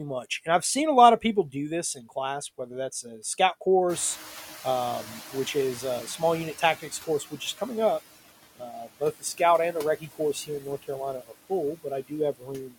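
Throughout the speech, the noise suppressor gates the background band by band, cutting it by about 14 dB. These noise suppressor artifacts make the remaining noise sink between words and rise under them.

From 3.89 to 7.24 s, the suppressor is catching up. The room noise jumps by about 19 dB near 4 s, and the suppressor's estimate takes 3.35 s to adapt. The louder background passes through before it settles with about 11 dB of reduction.

Speech is cut by the noise suppressor at 6.8 to 7.61 s, 8.56 to 9.4 s, 9.73 to 10.89 s and 11.21 to 12.76 s. In each span it mistakes parts of the speech for noise, pulling them down by about 15 to 18 dB. A total of roughly 150 to 400 ms per span is affected, and those syllables sound swallowed or faint.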